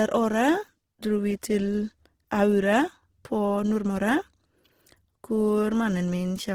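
From start to finish the speech sounds rough and grainy, with a noisy, hissing texture in place of clean detail in the upper frequencies. The damage is plainly audible, though the treble isn't dulled and there is little of the swirling of MP3. This is likely Opus compression in its music-oriented CELT mode, which fits a low bitrate around 16 kbps. The encoder keeps the energy in each band but, with too few bits, fills the fine structure with noise or copied lower bands.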